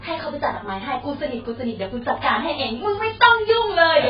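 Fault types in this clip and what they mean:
AAC compression: Heavy coding damage runs through the whole speech clip, with nothing above about 5.1 kHz, so it sounds dull and smeared, with a warbling, fizzy texture on sustained sounds and sibilants. This likely comes from AAC-LC at a very low rate, consistent with around 12 kbps.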